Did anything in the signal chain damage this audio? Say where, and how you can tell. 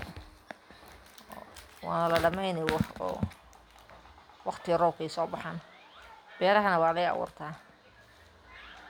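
No, nothing in the chain damaged this speech recording.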